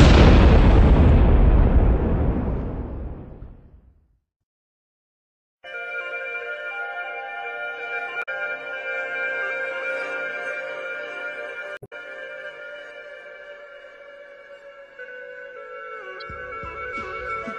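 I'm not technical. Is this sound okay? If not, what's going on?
No. Damaged data in a compressed stream causes brief glitches at 8.19–8.29 s, 11.74–11.93 s and 16.20–16.22 s, where corrupted bits of the file make the player stumble.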